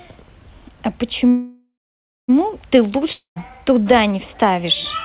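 A speech clip carried over a call link with nothing above 4 kHz, a band limit consistent with G.711 A-law at 64 kbps. From 1.28 to 2.30 s the sound stalls. The last fragment is drawn out as a fading buzz or hiss that dies into roughly 0.6 s of silence before speech resumes exactly where it stopped, a full second late. This is a call audio freeze, likely from packets held up in transit so that the jitter buffer ran empty. Nothing is lost, but the whole remainder now trails by about 1 s. A shorter break runs from 3.12 to 3.38 s. Again a decaying buzz or hiss, then about 0.13 s of silence, but here speech comes back further on, with roughly a quarter second skipped. That is a long network dropout: likely packets that never arrived, so the missing stretch was never played.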